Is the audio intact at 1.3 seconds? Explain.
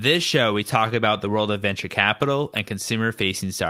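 Yes, the audio is intact at 1.3 seconds, with no dropout, click, distortion or other technical fault audible at that point.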